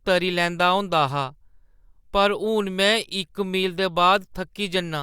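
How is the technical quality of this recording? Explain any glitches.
No glitches or dropouts are audible anywhere in this speech recording, and there is nothing here that needs explaining.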